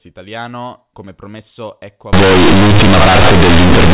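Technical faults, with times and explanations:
2.13 s to the end: companded audio read as linear. The G.711 mu-law bytes from the telephone path stop being expanded and are played straight as linear 8-bit samples, so the logarithmic codes land at the wrong amplitudes. Every sign change throws the output across roughly half its range, and quiet passages come out as loud as loud ones, giving a harsh, buzzy, heavily distorted sound with strong noise filling the pauses, unlike the band-limited but clean speech before it.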